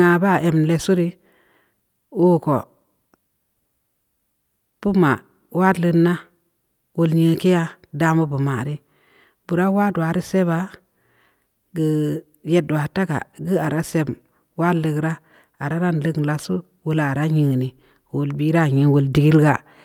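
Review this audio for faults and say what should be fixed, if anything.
No faults found; nothing needs fixing.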